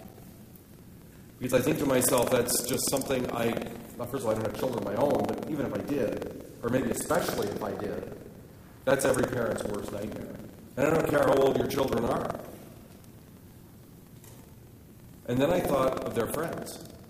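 A low, robotic rattle at about 21.5 Hz, which fits a 2048-sample buffer, runs through the whole clip wherever there is sound. This is buffer tearing: the writer and reader of the ring buffer have slipped, so roughly a seventh of each period replays audio from about 150 ms earlier, with hard joins.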